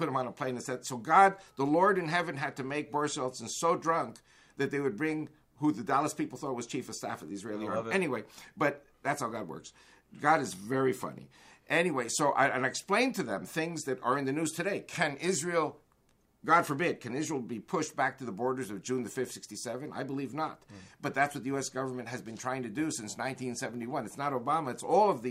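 Nothing technically wrong can be heard anywhere in this audio. No fault turns up at any point, so there are no times or causes to give.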